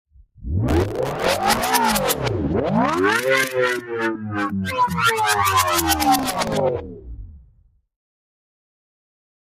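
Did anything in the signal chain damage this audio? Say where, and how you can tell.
Yes. The call-processing stage left a noise suppressor for speech on a recording of sounds. It treats steady parts, ambience and decaying tails as noise and pulls them down, so the level keeps shifting by around 5 dB across the whole clip. Onsets come through while sustained material and tails sink, which is the telltale sign of a speech-tuned noise suppressor applied to music or sounds rather than a natural change in the source.

The same processor also produced sound cut by the noise suppressor at two points. From 0.11 to 0.44 s the sound drops by up to about 11 dB, and from 6.83 to 7.81 s by up to about 12 dB. These are deeper than the general swing. The suppressor judged these stretches to be noise and attenuated them harder, so what should hold or fade away is pushed down instead.

At the driver or buffer stage there is processor overload crackle from 0.68 to 1.63 s and again from 6.19 to 6.54 s. 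In each burst a gritty tearing rides over the sound and then stops. The processor repeatedly misses its buffer deadlines, and each miss replays a fragment of old audio with hard edges. The rapid rate of these discontinuities fits a very short buffer of around 1.5 ms.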